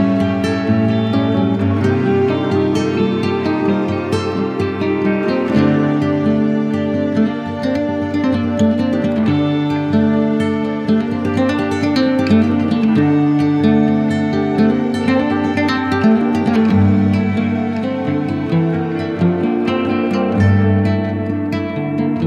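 No technical faults are audible anywhere in the audio, so there are no times or causes to report.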